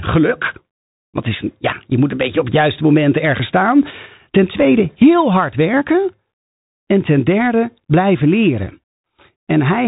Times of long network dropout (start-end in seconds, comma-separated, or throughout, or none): none